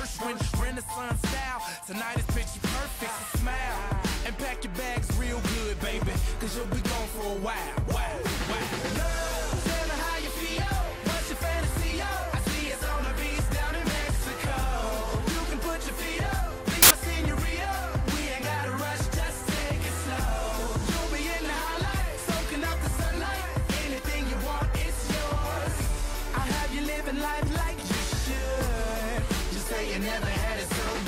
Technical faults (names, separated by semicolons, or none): samples built from the wrong bytes